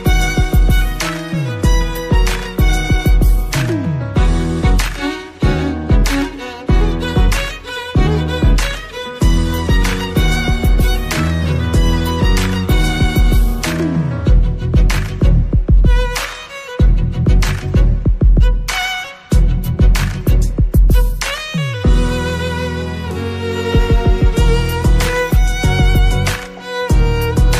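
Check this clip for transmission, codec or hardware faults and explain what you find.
Listening through the clip, nothing stood out as a fault of any kind.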